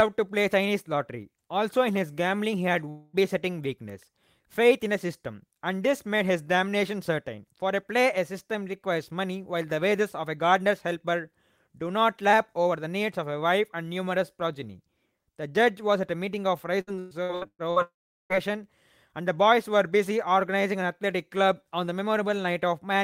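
At 2.89 s the speech breaks off for about a quarter of a second, until 3.16 s. A fading buzz carries the last sound across the hole. This is likely a long network dropout. The lost stretch is never played.

From 16.81 to 17.79 s there is repeated packet loss, with a robotic sound. Six gaps fall in under a second, the longest 117 ms. Each is patched by repeating the last sound. About half the stretch is filler, so it sounds choppy.

Right after, from 17.82 to 18.33 s, another likely long network dropout follows. About half a second is lost. A brief fading tail gives way to roughly 390 ms of silence before the speech resumes further on.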